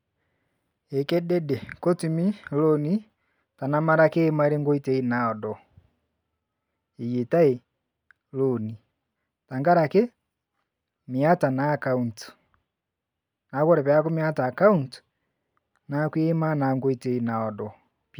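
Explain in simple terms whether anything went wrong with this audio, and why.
Listening through this speech recording, nothing went wrong that I could hear.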